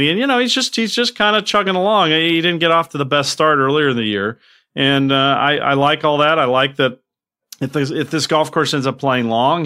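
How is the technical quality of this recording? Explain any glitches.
Listening through the speech, I don't hear any glitches at all, so there's really nothing to explain here.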